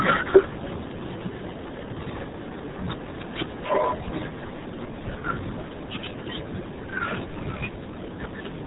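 RealAudio 14.4 codec damage runs throughout this speech, with nothing above 3.8 kHz, leaving it muffled and gargly, which fits an 8 kbit/s dial-up codec.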